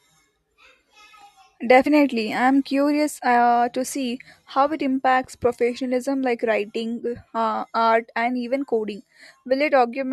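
A speech recording with a short digital blip at about 1.86 s, just before "I'm curious uh to". This is damaged data in the compressed stream: corrupted bytes make the decoder lose sync and search for the next valid frame.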